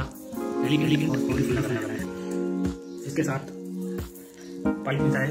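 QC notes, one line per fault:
0.33–2.05 s, doubled audio track: a full-band copy trails the original by roughly a fifth of a second at about the same level, with no decay. The likely cause is a second, slower capture path or misaligned edit. The waveform shows each envelope repeated, and the spectrogram shows every event ghosted, with the copy starting and stopping abruptly.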